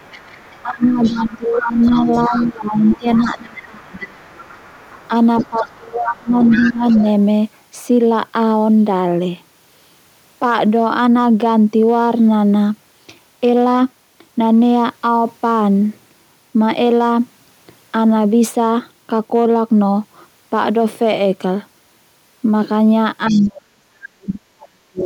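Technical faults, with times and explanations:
Throughout: hard clipping. The signal runs about 1 dB past what the chain can pass, so around one percent of samples are cut flat at the ceiling. The squared-off peaks add high harmonics, heard as a light crackle on the loudest moments of speech.
0.00–2.47 s, 2.78–5.75 s, 6.08–7.03 s and 23.28–23.47 s: other side's voice leaking through. A second, fainter voice sits roughly 10 to 20 dB under the talker. This is likely loudspeaker playback reaching the microphone that the echo canceller failed to fully remove.
0.63–1.93 s, 2.28–4.20 s, 5.50–7.04 s and 23.30–25.06 s: speech suppressed in double talk. The talker's level drops sharply, by roughly 20 to 25 dB early on and about 40 dB near the end. Both sides were talking, and the echo canceller likely pulled everything down.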